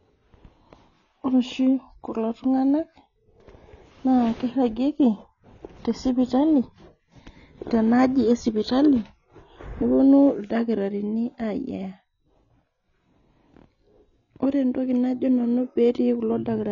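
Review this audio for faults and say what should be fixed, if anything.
The speech sounds dull and smeared across the whole clip, with a warbling, fizzy texture on sustained sounds and sibilants, and nothing above 6.9 kHz. This is likely AAC compression: an AAC-LC encoder starved of bits throws away high frequencies and quantises the remaining spectrum coarsely, leaving gaps and noisy fill that shimmer from frame to frame. The damage is plainly audible and fits a low bitrate around 24 kbps. To prevent it, encode from the original source at a higher bitrate, such as 96 kbps or more for speech.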